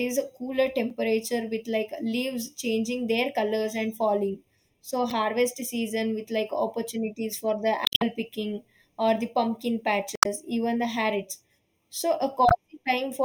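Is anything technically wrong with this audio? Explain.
Yes, there are two problems. Throughout the speech the sound is hollow and phasey, with a thin, scooped midrange. This is channel delay (comb filtering): one channel runs a fraction of a millisecond behind the other, about 0.3 ms. When the two are summed to mono, shared content cancels at evenly spaced frequencies. The first deep notch falls around 1.5 kHz and more follow at regular intervals above it, which produces the fixed, hollow colouring.

There are also five brief glitches that sound like chirps, squawks, clicks or short holes: at 0.90 s, from 5.10 to 5.12 s, from 7.84 to 8.02 s, from 10.14 to 10.26 s, and from 12.49 to 12.52 s. These are damaged data in a compressed stream. At those points corrupted bytes cause the decoder to misread frames and lose sync while it searches for the next valid frame header. The longest event is around 8 s. 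The event at 10.14 s also adds about 33 ms of time.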